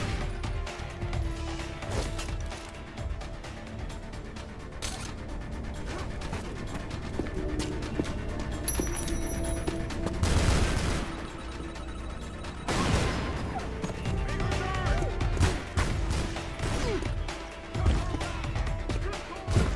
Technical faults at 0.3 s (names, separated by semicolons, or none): none